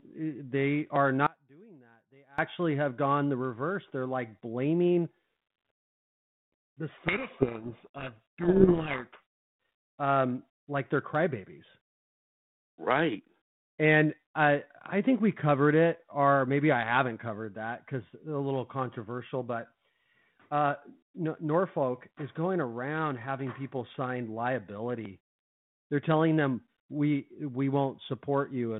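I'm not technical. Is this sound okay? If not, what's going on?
No, there are two problems. From 1.27 to 2.38 s, about a second, there's an audio dropout to a faint residue: the speech abruptly vanishes, leaving only a faint, much quieter trace. The likely cause is the signal cutting out while the line stayed open.

From 6.98 to 9.21 s, there's a codec payload misread. The two ends of the phone link disagree on the bit order of the G.726 codec, so the receiver decodes the data wrongly and the speech is buried in harsh distortion until it clears.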